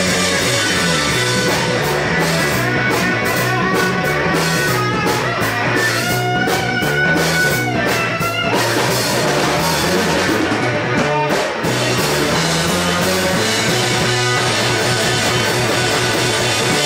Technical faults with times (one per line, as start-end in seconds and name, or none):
3.33-3.35 skip ahead
3.91-4.28 jitter buffer speed-up